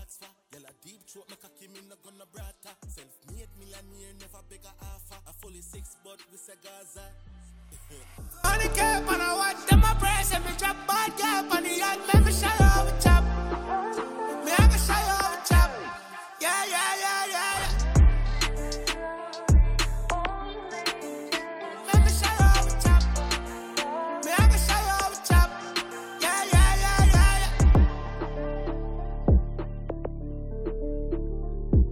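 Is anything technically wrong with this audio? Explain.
Yes, two problems.

From the start to about 8.44 s the level drops by about 25 dB, with the centre of the mix nearly gone. That's most likely one channel inverted: one side of the stereo pair has flipped polarity, so when the two are summed to mono everything they share cancels, leaving only the faint difference between them.

Then at 10.69 s there's a brief glitch, gone almost instantly. That's damaged data in a compressed stream: part of the encoded file was corrupted, so the decoder misread that frame and lost its place before locking back onto a valid frame.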